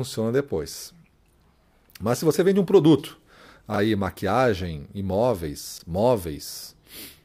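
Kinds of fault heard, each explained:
Chunks out of order: a 20 ms chunk of the speech turns up one slot late and plays after the chunk that should have followed it. Nothing's missing, but the swap leaves three hard joins, so you get a quick jumbled stutter. It happens at about 3.74 s, between "você vende um produto" and "maquiagem imóveis", and again at about 5.78 s, just after "maquiagem imóveis".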